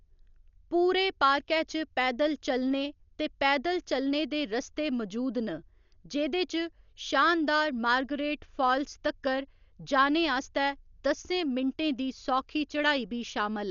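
Throughout, the speech sounds dull and fluttery, likely heavy Dolby Digital compression, starved mantissas replaced by noise, fitting about 48 kbps; spectrograms show nothing above 6.9 kHz.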